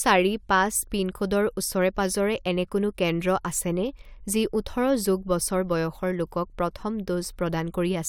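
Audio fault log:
No fault can be heard anywhere in this speech.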